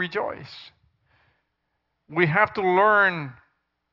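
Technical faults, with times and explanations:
Nothing here to flag: the speech comes through with no technical faults at any point.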